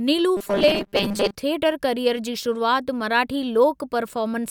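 From 0.37 to 1.36 s, before "थियटर कैरीयर जी शुरूआति", the speech has a rigid 200 Hz metallic buzz: robotic sound from repeated short buffers, likely a 5 ms block replayed while about half the audio is skipped.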